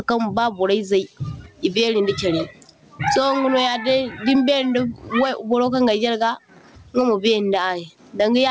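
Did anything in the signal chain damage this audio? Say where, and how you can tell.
Yes. Gain pumping runs through the whole speech clip, a gain swing of roughly 15 dB. This likely comes from excessive input gain with a fast limiter or automatic gain control squashing dynamics; the G.722 band limit near 8 kHz is expected.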